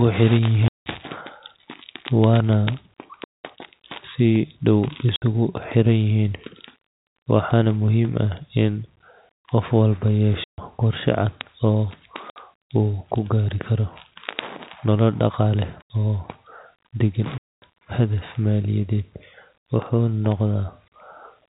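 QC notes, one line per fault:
0.68–0.86 s, 3.24–3.35 s, 5.16–5.22 s, 7.08 s, 10.44–10.58 s, 12.30–12.36 s, 15.82–15.90 s, 17.38–17.62 s: packet loss filled with silence. The speech drops out to dead silence for 60 to 240 ms per gap. At 7.08 s, 120 ms is lost in pieces spread over 160 ms, the longest piece 80 ms. All gap lengths are multiples of 20 ms, which fits 20 ms packets. The cuts have hard edges against the band-limited telephone-grade G.711 audio.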